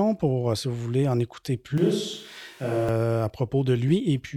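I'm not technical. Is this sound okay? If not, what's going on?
No. From about 1.78 to 2.89 seconds, just after "vous voulez en écouter", the recording likely stops using the close microphone and briefly picks up a distant microphone instead, such as one on a camera. That is a switch to a distant microphone: the voice suddenly turns hollow and roomy, loses its warmth, drops noticeably in loudness and sits in more background noise. Then, just as abruptly, it snaps back.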